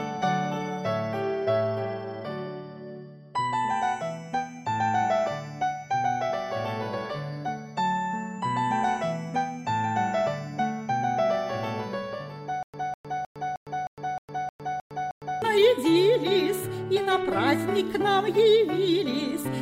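From 12.63 s to 15.42 s the audio breaks into a stutter with silent gaps. A burst about 203 ms long plays, drops to dead digital silence for about 108 ms, and then the same burst plays again. It repeats nine times at an even 310 ms period. The likely cause is a stalled player or stream that replays its last buffered fragment on each retry and then runs empty. Whatever should have sounded across that stretch is lost.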